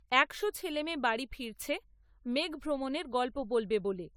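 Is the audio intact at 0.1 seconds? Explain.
No. At 0.1 seconds, as everywhere in this speech, there is generation loss, most likely from the audio being decoded and re-encoded through an AAC-style lossy codec around half a dozen times or more, at a rate that points to about 96 kbit/s. Each pass re-quantises on a shifted frame grid, so noise and spectral gaps stack up. The result is swirly, hollow, smeared sound with softened attacks, and nothing above 19.8 kHz.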